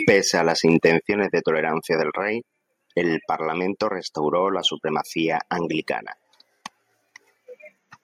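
From 0.08 to 0.91 s the loudest syllables carry a harsh, crackling edge, the sign of microphone overload. The input level was likely set too high, so peaks ran about 2 dB past the converter's ceiling and their tops were sheared flat. Only a small fraction of samples, under one percent, are affected. The distortion therefore rides on the peaks alone rather than coating every sound, which separates it from a steadily overdriven or saturated chain.

At 1.02 s, just before "de tolerancia", the speech and the background noise drop together by about 4 dB in a single step. This is the microphone volume stepped down, likely the call software reacting to the clipped peaks just before it by cutting the device's input gain. The drop happens at once and then holds, so it is neither a fade nor a gate closing. The noise floor falls with the speech, which points to an input gain change rather than a compressor acting on loud sounds.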